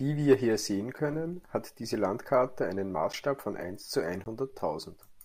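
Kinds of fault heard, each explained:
Block of digital silence, at 3.13 s and from 4.24 to 4.26 s: the speech drops abruptly to silence for 10 ms, then 20 ms, with no fade, so the first is heard as a tick and the second as a short hole, pointing to an output buffer left unfilled in time.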